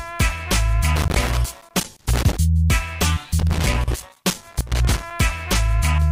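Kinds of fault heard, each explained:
Loose connector crackle: a worn or dirty contact in the signal path keeps making and breaking as it shifts, chopping the audio. Here it gives two irregular bursts of scratchy crackle, from 0.96 to 2.37 s and from 3.39 to 5.11 s.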